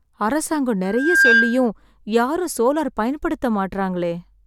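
A microphone is picking up its own loudspeaker, and at 1.6 kHz the loop gain exceeds one, causing loudspeaker feedback squeal in this speech clip from 0.84 to 1.67 s. A pure tone swells over roughly 0.4 s to about 10 dB above the speech, stopping just before "யாரும் சோலார்".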